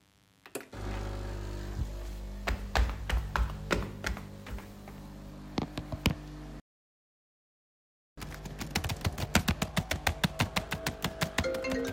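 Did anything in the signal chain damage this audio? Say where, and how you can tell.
Yes, the damage is at the playback stage. At 6.60 s the audio cuts off in mid-flow and the output stays completely silent for about 1.58 s, until 8.18 s, when the sound resumes. This is a playback stall. A dead gap like this points to the player, not the recording. The likely cause is that the player's buffer ran dry or its thread was blocked, so nothing reached the output until it recovered.

Right after the gap, from 8.18 to 11.18 s, the audio runs hurried, at about 1.1 times normal speed, while its pitch stays where it was. This is time-compressed catch-up. Having fallen behind during the stall, the player shortens its backlog by dropping small slices of audio and cross-fading across the joins. That keeps the pitch intact.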